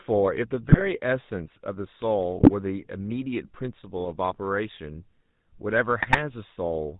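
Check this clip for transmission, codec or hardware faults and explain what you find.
Two faults are present: GSM full-rate coding throughout the speech, and three short bursts of GSM bit errors.

GSM full-rate codec, whole clip: the voice is rebuilt from a vocal-tract filter driven by sparse, evenly spaced pulses, consistent with 13 kbps GSM full rate. Nothing above 4 kHz survives, and the speech has a plainly audible buzzy, gravelly roughness.

GSM bit errors, at 0.69 to 0.88 s, 2.38 to 2.51 s, and 6.00 to 6.16 s: corrupted filter, pitch and gain values reach the decoder, which points to an error rate of roughly 2%. Each burst distorts the spectrum and level for several frames, heard as squawks, pops and gargling.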